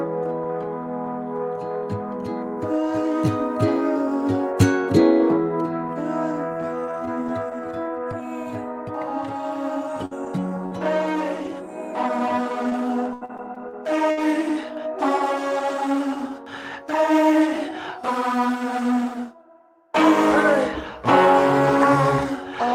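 At 10.05 to 10.13 s, a burst of packet loss is patched by stretching and fading the last sound for about 54 ms. Then about 40 ms of audio is skipped. Lost packets rebuilt from error correction follow at 10.11 to 10.13 s and 10.26 to 10.28 s. These 20 ms pieces sound rougher and noisier, with no gap. A second burst at 10.66 to 10.73 s holds the sound for 54 ms and drops about 60 ms. Another rebuilt packet sounds rough at 11.45 to 11.47 s. From 12.63 to 14.19 s, repeated packet loss gives a choppy sound. Seven holes are patched, and the longest lasts 77 ms. About 280 ms goes missing, and a small part is roughly rebuilt.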